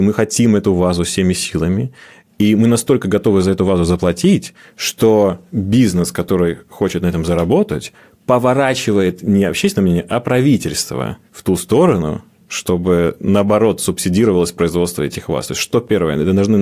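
Nothing goes wrong anywhere in this speech recording, so there's no technical fault to point to at any moment.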